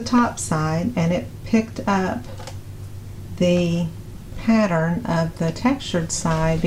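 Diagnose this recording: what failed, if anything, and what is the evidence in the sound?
Nothing failed, and there is no evidence in the sound of a fault at any stage.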